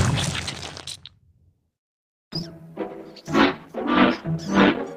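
Repeated packet loss (robotic sound) sets in between 2.13 and 2.51 s. A handful of holes open in quick succession, the longest about 142 ms. Each one is bridged by stretching out the sound that came just before, so nearly half of that short span is synthetic fill and about 80 ms is simply missing. The result is a choppy stutter with pieces missing rather than clean silence. A call bitrate drop follows from 2.82 s until the clip ends at about 4.95 s. The sound turns coarse and watery for roughly the last 2 seconds, which fits the network's bandwidth estimate collapsing and the encoder being pushed from around 40 kbps down to about 14 kbps. With so few bits available, fine detail is quantised away, and the audio stays degraded for the rest of the clip without ever recovering.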